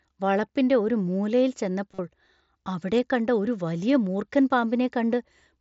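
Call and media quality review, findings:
Concealed Bluetooth headset packet loss at 1.94–1.99 s, right after "ഒരു മൂലയിൽ": about 45 ms of buzzy, full-level repeated waveform, then a slight warble as real audio resumes. Phone's receiver looped recent audio over lost packets, which fits a run of about six dropped mSBC frames. The mSBC wideband codec itself is carrying the audio.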